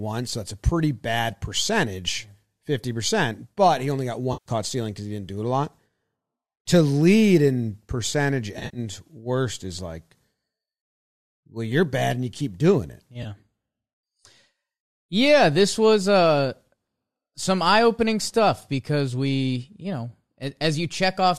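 AAC frame loss with concealment hits at 4.33–4.50 s, after "but he only got", and at 8.57–8.79 s, after "lead in percentage". Each time about 130 ms of missing audio is refilled from the previous spectrum, so the sound turns smeared, noisy and phasey. In the second event the gaps are scattered, with the longest run roughly 70 ms. A brief 20 ms blip follows at 13.23 s, after "you keep doing it". All of this passes through a low-delay AAC path, likely AAC-ELD.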